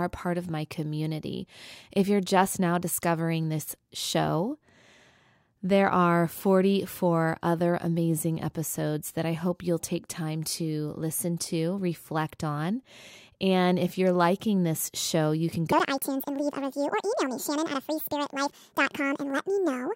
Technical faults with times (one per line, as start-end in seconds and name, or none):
15.72-19.96 section at the wrong speed